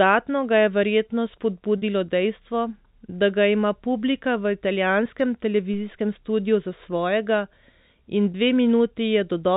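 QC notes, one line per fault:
1.78 s and 8.32 s, packet loss with pitch repetition: The first gap comes just after "ga je verjetno" and lasts 40 ms, which fits two lost 20 ms packets. The second lasts 20 ms, which fits one lost packet. In each gap the receiver filled the hole by repeating the last pitch period and fading it out. Both gaps are shorter than that fade, so the sound never drops to silence. It holds briefly with a slightly buzzy, frozen quality before normal audio resumes.
5.74 s, DC step: Between "ima publika v italijanskem" and "studiu za svojega", the waveform's zero line suddenly jumps to a new offset. The offset then drains away gradually as a 2 Hz high-pass pulls it back toward zero. The sudden shift is heard as a single low thump or click. The telephone-band sound, which is limited below 4 kHz by the G.711 A-law coding, carries on across the step without any change to its own content.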